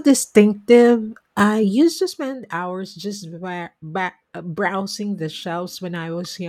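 From 1.6 to 2.4 s the speech drops in level by about 10 dB, and a fine ticking, zipping texture rides on it for the whole fall. That is zipper noise. The gain was lowered in discrete jumps, around fifty a second, rather than as a continuous ramp, so each abrupt jump puts a tiny click into the waveform. Strung together, those clicks form the buzzy rasp heard while the level moves.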